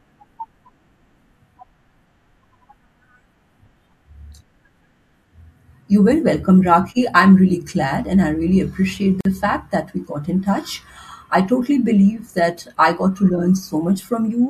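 A speech clip with a gap at a join of encoded pieces at 9.21 s, just after "and I really appreciate": a gap of about 46 ms cuts into the speech, its edges smeared, then the sound resumes where it stopped. Separately encoded segments were joined untrimmed, leaving encoder delay and padding in place.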